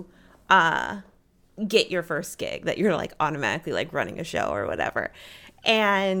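No technical faults can be heard anywhere in the speech. There is nothing to place in time or explain.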